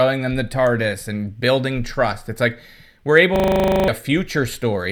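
At 3.36 s, just after "like we're", a system hang loop sets in: the machine stalls while the sound hardware keeps replaying one 40 ms stretch of its buffer until 3.88 s. That repetition, about 25 times a second, gives a steady rough buzz, and roughly half a second of speech never plays.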